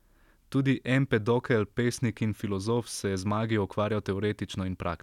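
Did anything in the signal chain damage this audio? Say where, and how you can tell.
No, nothing in the signal chain audibly damaged this speech; the signal holds together with no breaks, level jumps, distortion or added noise anywhere along the way.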